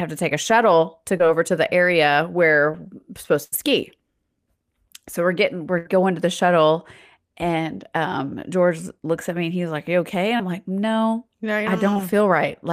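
Speech recording showing two kinds of network dropout. Short concealed packet loss occurs at 1.17–1.21, 2.71–2.75, 10.37–10.41 and 11.93–11.97 s: about 20 ms never arrived, and the receiver extrapolated the preceding sound, leaving brief smears. A burst of packet loss at 3.43–3.54 and 5.78–5.87 s drops about 80 ms each time, heard as a fading held sound before the speech resumes further on.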